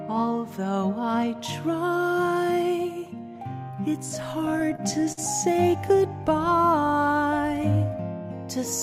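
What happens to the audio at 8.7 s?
At 8.7 s the audio carries on intact, with no dropout, click, distortion or other fault at that moment.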